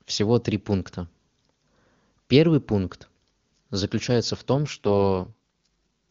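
An AMR rate drop runs from 4.54 to 5.67 s. The speech turns rough and synthetic, which fits the wideband codec falling from about 23.85 kbit/s to its 6.6 kbit/s mode. The band stays the same, with no gap, and clarity returns once the higher rate resumes.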